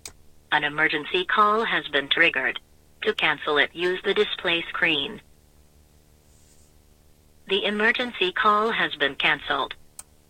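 A video or display buzz runs through the whole clip. A screen or its video cable is coupling into the audio path. The buzz sits at 75 Hz, the picture's field rate, rather than at mains frequency. Above it lies a gritty hash of harmonics from the display's switching. It stays steady from start to end. The level is low, roughly 35 dB below the main sound. It is most exposed in quieter moments.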